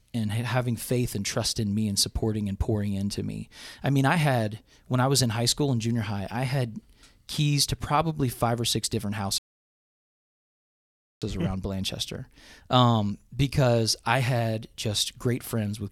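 Speech clip with one rebuffering stall: at 9.38 s the audio drops to silence and picks up again at 11.22 s exactly where it left off. The player ran dry and waited for more data, so nothing's missing, just about 1.8 s of dead air added.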